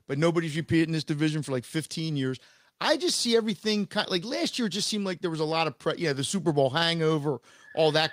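No technical faults can be heard anywhere in this speech recording.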